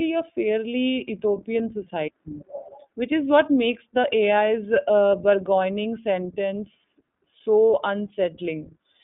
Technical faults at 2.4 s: iLBC codec

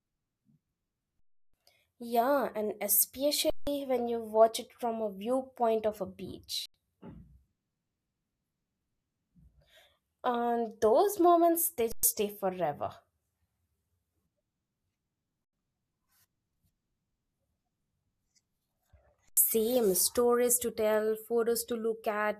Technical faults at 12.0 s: underrun with held sample

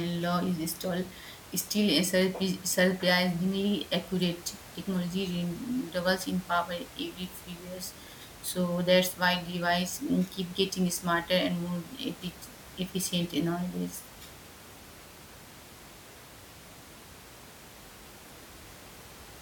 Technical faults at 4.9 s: none

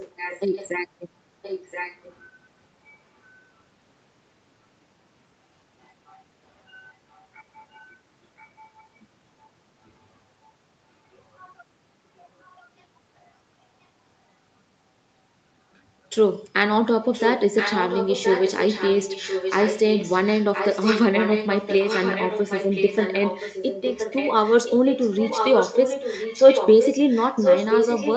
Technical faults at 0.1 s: echo leak

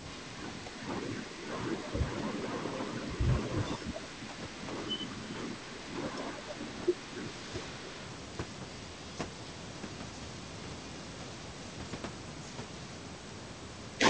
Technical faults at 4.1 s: none

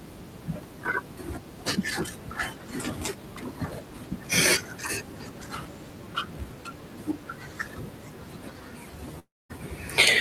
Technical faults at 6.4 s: none

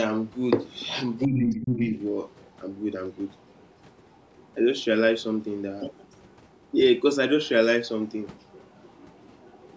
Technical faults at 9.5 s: other side's voice leaking through

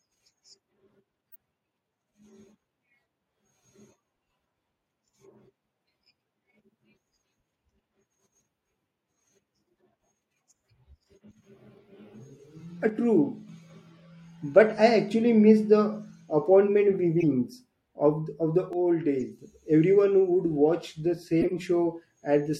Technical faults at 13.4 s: one channel drops out

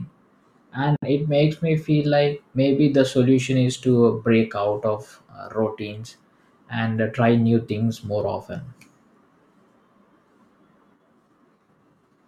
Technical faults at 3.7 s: none

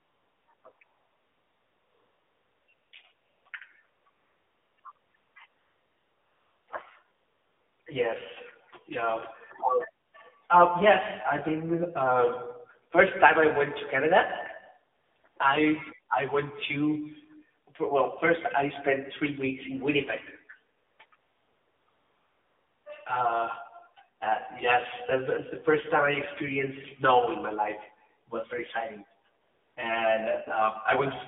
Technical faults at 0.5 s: AMR narrowband mobile codec; AMR comfort noise

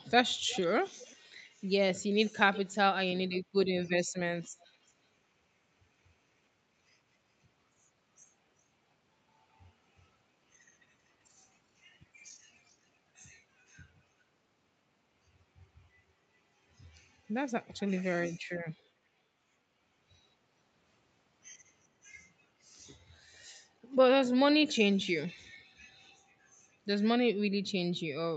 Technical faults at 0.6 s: echo leak

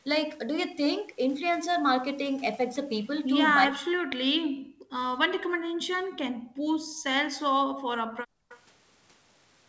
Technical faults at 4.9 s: background gated by the echo canceller

